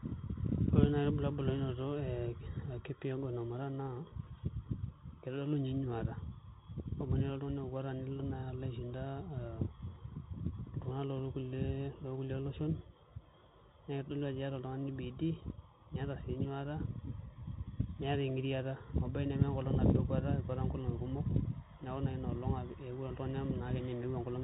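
Throughout, the speech passes through a Bluetooth CVSD headset codec, which encodes one up-or-down bit per step with an adapting step size. Plainly audible damage fits its 64 kbps rate: nothing above 3.8 kHz survives, s sounds turn scratchy, and granular hiss sits underneath.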